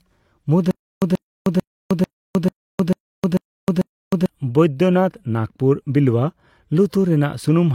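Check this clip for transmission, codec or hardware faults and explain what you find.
There is one fault, a stutter with silent gaps, from 0.71 to 4.26 s. The same 134 ms burst of speech plays eight times, each followed by 310 ms of silence, so it comes back every 444 ms at a steady, mechanical pace. The likely cause is a stalled player or stream that replayed its last buffered fragment at each retry attempt and then ran empty. The speech that belonged in that stretch is lost.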